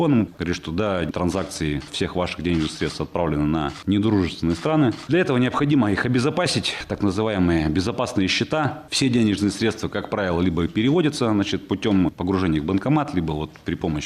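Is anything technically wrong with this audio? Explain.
No, nothing technically wrong is audible anywhere in this recording.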